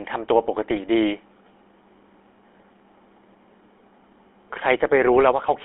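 The speech has passed through the GSM full-rate codec for its whole length, which fits a 13 kbps rate. The codec rebuilds the voice from a vocal-tract model excited by a sparse, regularly spaced pulse train, so fine detail in the excitation is lost. The result is a plainly audible buzzy, gravelly roughness, and the sound sits in a narrow telephone band from about 250 Hz to 3.5 kHz, thin and lacking low warmth and high crispness.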